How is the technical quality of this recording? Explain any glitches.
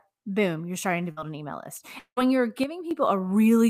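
The recording has three audible glitches.

At 1.11 to 1.19 s, after "boom you're starting to", a burst of packet loss: the receiver stretches the last sound for roughly 50 ms, fades it, and resumes at "an email list" with about 60 ms missing.

At 1.99 to 2.19 s, just after "an email list", a long network dropout, likely from a stall in packet delivery: concealment fades out, leaving about 90 ms of silence, and roughly 180 ms of audio is lost.

From 2.64 to 2.91 s, a sudden gain jump: speech and background drop together by about 8 dB, likely from a digital gain step applied without any ramp.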